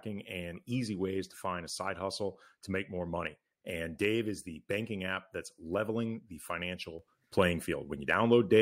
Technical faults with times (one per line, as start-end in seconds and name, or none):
6.99-8.62 sudden gain jump